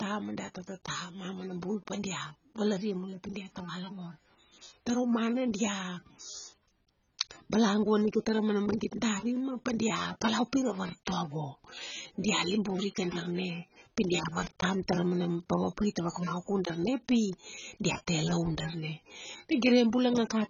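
Throughout the speech, nothing is present above 7.1 kHz, leaving it dull and band-limited despite a high-bitrate MP3. This is likely low-bitrate audio saved at a high bitrate: a very low-bitrate first encode, around 16 kbit/s AAC, removed that detail, and the later 256 kbit/s pass could not restore it.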